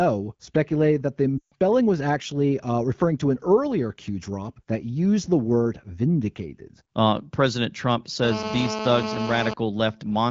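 At 1.38 to 1.53 s, after "speculated that the" and before "was actually uh referring", lost AMR speech frames: about 140 ms, fitting seven dropped 20 ms frames. The decoder reuses the last good settings with falling gain, so the sound drops to near silence within two frames.

From 8.24 to 9.54 s, GSM phone buzz: a steady, raspy 217 Hz drone about 6 dB below the speech, visible as evenly spaced harmonic lines and regular pulses in the waveform.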